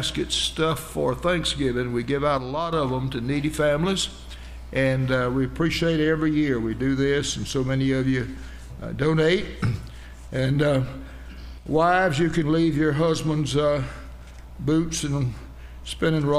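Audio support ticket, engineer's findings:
Likely one channel dropping out upstream of the mono sum, briefly at 2.38–2.73 s and 11.58–11.66 s. Sudden level dip of about 6 dB on shared content; anything carried only in the missing channel vanishes, then returns abruptly.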